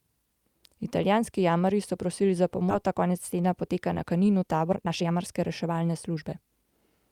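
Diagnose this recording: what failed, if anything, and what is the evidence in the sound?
The failure is in the network and jitter buffer stage. A skip ahead occurs at 2.69 to 2.71 s. Playback jumps forward with no filler, and roughly a second of speech is missing. A stretch was dropped, in transit or by the overflowing buffer, while newer audio was already queued, and the two sides were spliced almost directly.

A jitter buffer speed-up follows from 2.84 to 6.72 s. Speech runs at about 115 percent of normal rate with unchanged pitch and sounds hurried. The receiver was holding excess delay and trimmed short pitch-period pieces repeatedly, about 0.7 s in total.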